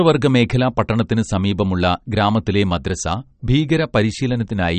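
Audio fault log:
Throughout, MP3 compression: the speech sounds watery and swirly with nothing above 8.4 kHz, likely from an encode near 40 kbps starving its weaker frequency lines.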